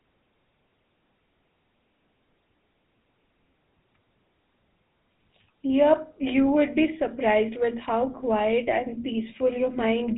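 Throughout, the speech carries GSM full-rate codec damage. Nothing passes above 3.8 kHz, and pulse-driven coding leaves a plainly buzzy, gravelly roughness, which fits 13 kbps.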